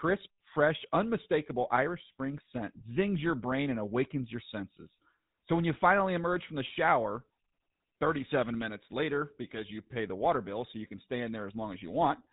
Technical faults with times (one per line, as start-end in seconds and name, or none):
0.00-12.32 GSM full-rate codec